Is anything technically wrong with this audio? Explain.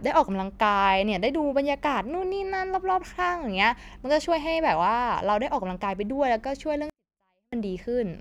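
Yes. From 6.90 to 7.53 s, a 24-bit alignment error (too quiet): 24-bit samples sitting in the low bytes of 32-bit words are read as full 32-bit integers, so the speech stays clean but drops about 48 dB, nearly inaudible. The waveform collapses to a flat line, and the spectrogram goes almost blank for that span.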